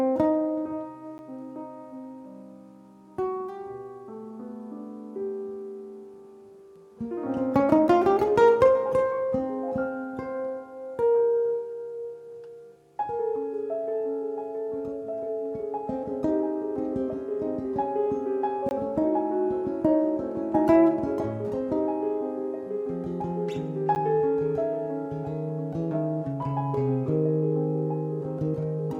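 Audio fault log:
1.18 s, 18.69–18.71 s, 23.95 s: block of digital silence. The audio cuts out for 10, 20 and 10 ms with no fade, so the 10 ms gaps are heard as ticks.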